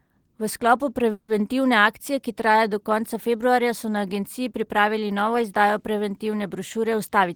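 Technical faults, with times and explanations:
1.11–1.31 s, call audio freeze: packets were likely held up on the network and the jitter buffer ran dry, so the receiver stretched the last sound into a fading buzz or hiss for about 170 ms, ending in a brief 10 ms silence. The speech then resumes where it stopped, nothing lost, but now 170 ms later.
7.09–7.31 s, jitter buffer speed-up: the buffer had built up more audio than its target, so the receiver trimmed short pitch-period pieces repeatedly, around 40 ms in all. The speech runs at about 114% speed with unchanged pitch, sounding briefly hurried.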